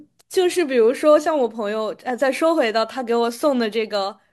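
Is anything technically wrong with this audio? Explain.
No, nothing is technically wrong with this audio.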